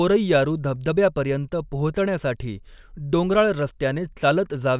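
A short recording of speech with no technical faults to be heard anywhere in the signal.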